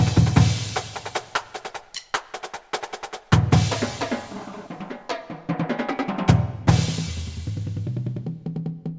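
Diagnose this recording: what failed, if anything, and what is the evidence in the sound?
Nothing in the recording stood out as a problem on listening.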